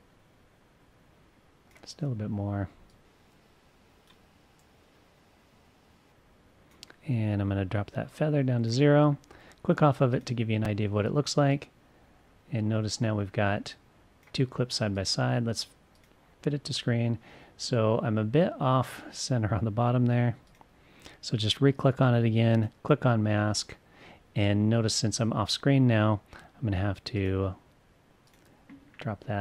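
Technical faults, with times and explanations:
10.65 s, repeated buffer: audio arrived late, so a piece of about 5.3 ms, fitting a 256-sample buffer, played twice more with hard joins. The tiny loop is heard as a brief click-buzz, not the silent gap of a dropout; roughly 10 ms is lost.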